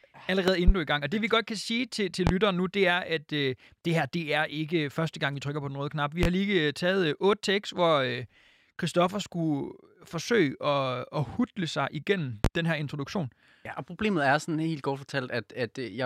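A sudden voltage pulse, likely from a plug, switch or static discharge, enters the signal path four times, causing loud pops: a double pop from 0.48 to 0.72 s, then single pops at 2.27, 6.23 and 12.45 s, each roughly 20 dB above the speech, which continues underneath.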